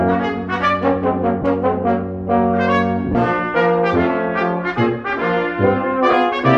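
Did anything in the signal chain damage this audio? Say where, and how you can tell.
Yes: lost LE Audio frames at 1.42, 3.12 and 6.11 s (20, 30, 20 ms). The LC3 decoder covers each gap on the Bluetooth link by replaying the previous spectrum with random signs, leaving brief noisy smears.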